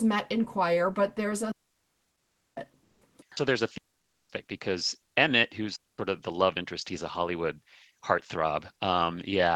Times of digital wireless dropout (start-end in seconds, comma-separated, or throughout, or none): 1.52-2.57, 3.78-4.29, 5.76-5.98